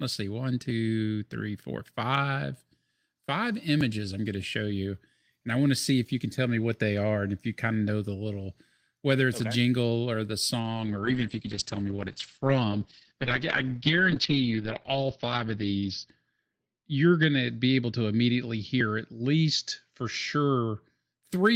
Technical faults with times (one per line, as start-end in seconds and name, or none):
0.70 dropped buffer (overrun)
3.81 dropped buffer (overrun)
10.61-21.29 call bitrate drop